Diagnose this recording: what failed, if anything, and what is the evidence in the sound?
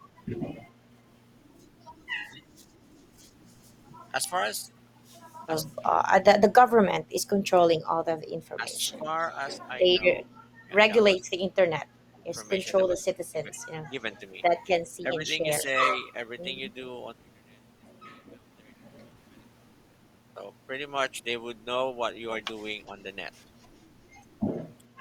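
Call processing failed, with speech suppressed in double talk. The speech dips at 7.08–7.42 s, 8.56–8.99 s, 10.25–12.22 s, 12.95–13.61 s, 15.01–15.25 s and 24.96 s to the end. The deepest cut is about 25 dB in the 7.08–7.42 s stretch and about 20 dB in the long 10.3–12.2 s stretch. The others are about 10 dB. The cause is likely an echo canceller treating simultaneous talk as echo and turning the near talker down with it.

An echo leak also comes from call processing. Faint delayed copies of the speech appear at 12.98–13.13 s and 15.58–15.62 s. Both trail the original by about 0.39 s. They sit about 25 dB and about 20 dB below the speech. They are brief scraps. A loudspeaker on one end feeding its microphone is the likely source, with that end's canceller letting residue through and sending it back.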